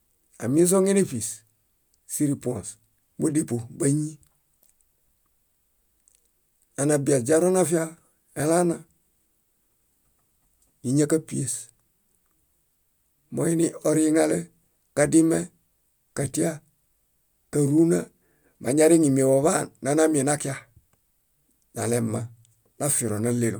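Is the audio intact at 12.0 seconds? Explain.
Yes, at 12.0 seconds the speech is intact, with no dropout, click, distortion or other fault at that moment.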